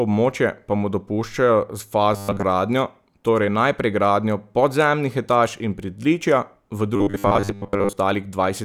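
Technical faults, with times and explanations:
2.14 to 2.44 s and 6.96 to 7.93 s, robotic sound from repeated short buffers. In both stretches the speech turns into a stiff, metallic buzz pitched at 100 Hz. It still loosely tracks the speech. The likely cause is new audio arriving too slowly, so playback loops a very short slice, about 10 ms long, to fill the gap. Those loops take up most of each stretch, and the audio they stand in for is lost.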